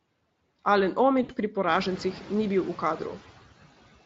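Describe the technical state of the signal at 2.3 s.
At 2.3 s, noise suppressor artifacts are present, as throughout the clip. The suppressor cuts the room noise by about 15 dB between phrases. That noise rose around 1.5 s, so it sinks between the words and rises again under the speech.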